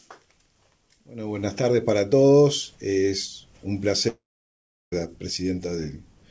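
At 4.08 s the audio breaks off into a short buzzy continuation of the last sound that quickly fades, leaving near silence for about 0.72 s before the audio returns at 4.94 s, with about 0.84 s of material simply gone. This is likely a long network dropout: packets stopped arriving, the receiver briefly extended the final sound to cover the gap and then gave up, and playback resumed later without the lost section. Throughout, the audio carries nothing above 8 kHz, which fits its G.722 call path at 64 kbps.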